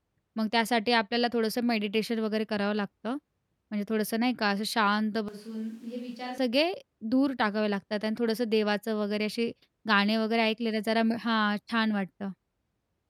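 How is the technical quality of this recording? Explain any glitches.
One glitch stands out in this speech recording. From 5.28 to 6.38 s the voice suddenly turns roomy and hollow, loses its low end, drops roughly 10 dB, and background noise rises to about 25 dB below the speech. The likely cause is a switch to a distant microphone: the close mic's feed dropped out and a farther one carried the sound. Unlike a plain gain dip, the tone and room character change too, and both transitions are abrupt.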